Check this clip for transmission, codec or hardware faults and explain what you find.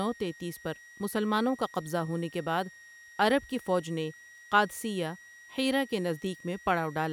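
One hardware fault runs through the whole speech clip: a switching supply whistle. A thin, high tone sits near 2 kHz, wandering between about 1.86 and 1.91 kHz, roughly 25 dB below the speech. A nearby switching power supply is cycling at an audible rate, and its pitch drifts as its load shifts.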